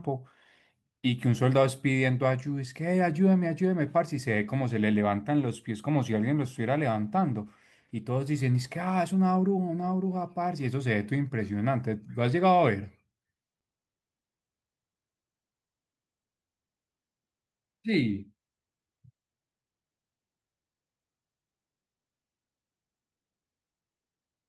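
No technical faults can be heard anywhere in the speech recording, and the signal stays continuous and steady from its opening to its close.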